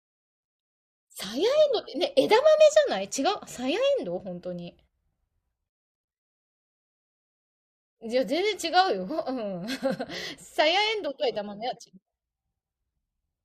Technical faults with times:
none

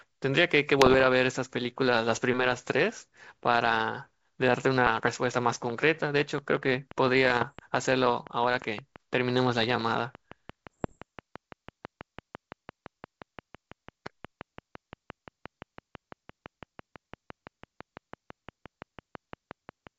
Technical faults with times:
0.79-1.06 bit errors on an ADPCM link
2.45-2.71 bit errors on an ADPCM link
4.86-5.08 bit errors on an ADPCM link
5.52-19.88 train of clicks
7.25-7.53 bit errors on an ADPCM link
10.73-10.98 bit errors on an ADPCM link

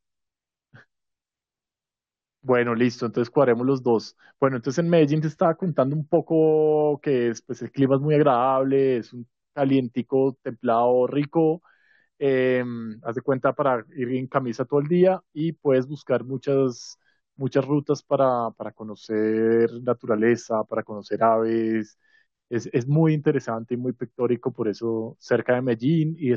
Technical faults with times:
none

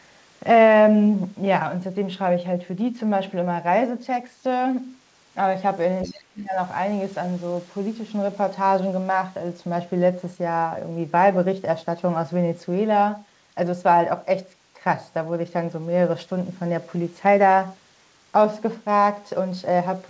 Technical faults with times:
6.03-6.12 other side's voice leaking through
6.05-6.56 speech suppressed in double talk

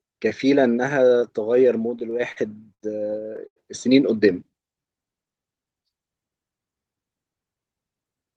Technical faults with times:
1.90-2.38 repeated stalls (stutter)
2.74-2.82 short stall from a late packet
3.47-3.58 short stall from a late packet

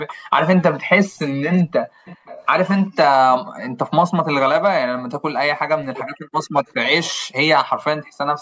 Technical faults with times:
0.07-0.14 echo leak
2.06-2.44 echo leak
5.74-6.63 speech suppressed in double talk

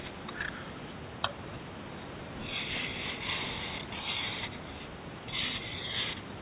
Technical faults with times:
none

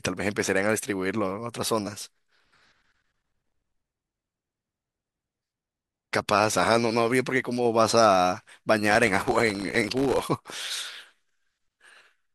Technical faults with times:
3.19-3.52 processor overload crackle
8.91-10.25 processor overload crackle

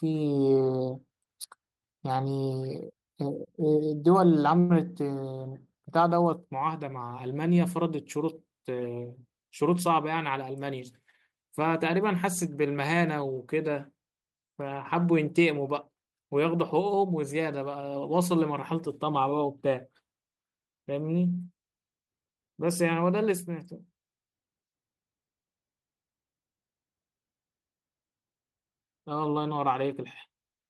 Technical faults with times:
4.59-4.72 call audio freeze
9.45-10.71 jitter buffer speed-up

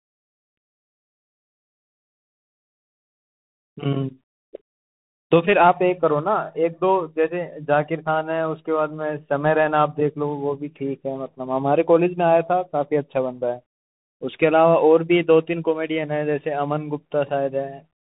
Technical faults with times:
0.00-18.16 Bluetooth CVSD headset codec

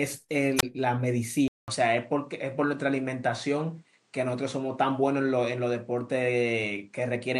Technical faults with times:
0.57-0.63 wireless microphone squelch dropout
1.48-7.40 input switched to a poorer device

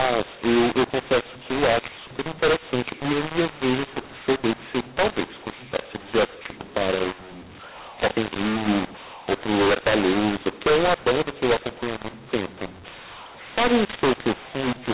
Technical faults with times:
0.00-14.94 mu-law and A-law mixed up

